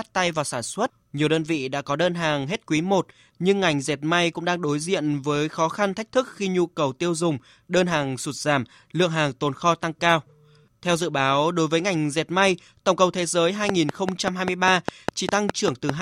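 From 13.69 s to 15.90 s, right after "tổng cầu thế giới", a train of clicks ticks steadily over the speech at five per second, about ten in all, standing well above the signal. It likely comes from outside interference. Each appears as a thin vertical line across the spectrogram and a sharp spike in the waveform.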